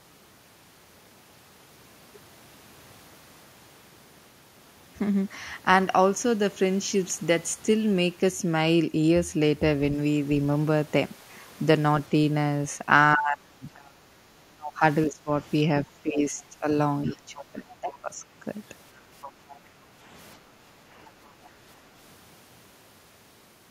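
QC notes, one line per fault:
13.15–18.15 s, speech suppressed in double talk: the talker's level dips by as much as about 30 dB across roughly three seconds, likely because the echo canceller clamped both overlapping voices, unlike background gating.
17.06–17.99 s, 19.23–19.56 s and 21.45–21.49 s, other side's voice leaking through: a faint second voice, about 20 to 35 dB below the talker, likely residual loudspeaker echo the canceller missed.
19.61–21.40 s, background gated by the echo canceller: the room sound, not the talker, sinks by up to about 7 dB for around a second while the loudspeaker plays, then recovers.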